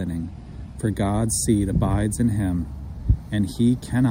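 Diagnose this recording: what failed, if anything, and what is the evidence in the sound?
Nothing in the signal chain points to a failure anywhere from capture to playback.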